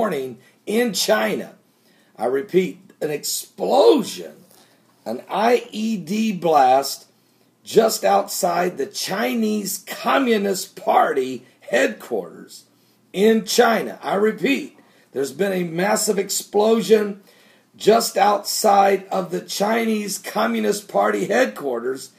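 No technical faults can be heard anywhere in the clip. Nothing in the audio stands out as a dropout, a glitch or a break in the signal.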